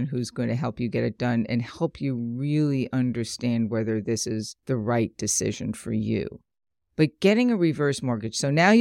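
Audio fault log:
Nothing to log here, as the speech comes across without any faults worth noting.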